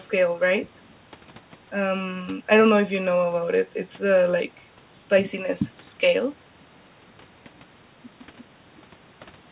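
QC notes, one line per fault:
Nothing stood out on listening to this speech.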